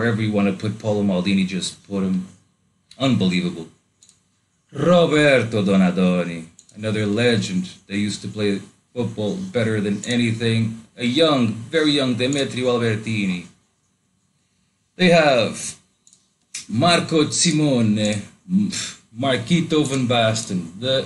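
No technical faults occur, so there is nothing to describe in time order.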